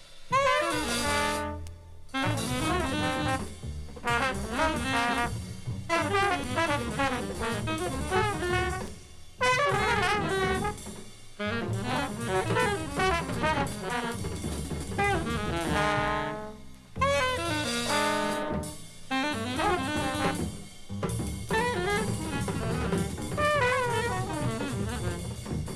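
No faults detected in this audio; nothing to flag.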